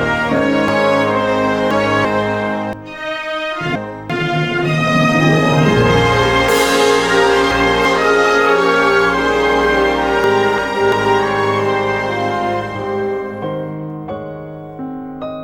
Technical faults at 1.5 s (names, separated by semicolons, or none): chunks out of order